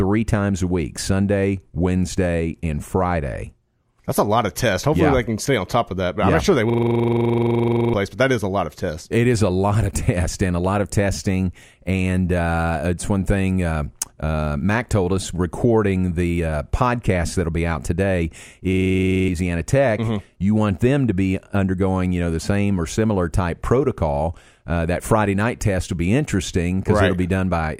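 Speech with two system hang loop events, at 6.70 to 7.94 s and 18.73 to 19.29 s. A frozen system left the sound hardware replaying one 42.67 ms slice, which fits a 2048-sample ring buffer. It repeats 29 and 13 times, giving a rattling buzz at 23.4 Hz and losing roughly a second and a half, then about half a second, of speech. The waveform shows identical repeating blocks, and the spectrogram shows fixed vertical stripes.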